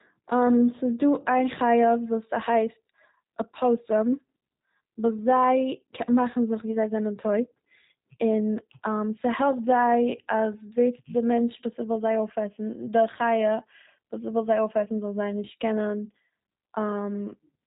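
Speech squeezed through the G.729 codec the whole way: nothing above about 3.8 kHz, plus a plainly rough, synthetic buzz that fits an 8 kbit/s G.729A rebuild.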